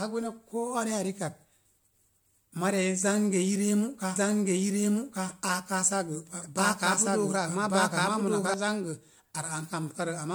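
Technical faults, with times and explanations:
Throughout: generation loss. Swirly, hollow, smeared speech with blurred attacks, likely from repeated MP3 re-encoding, perhaps four passes near 96 kbit/s. The spectrogram shows patchy holes and speckled noise.
4.16–8.54 s: doubled audio track. A full-band copy about as loud as the original trails it by roughly one second, likely from a second, slower capture path. The waveform shows a duplicated pattern that starts and stops abruptly.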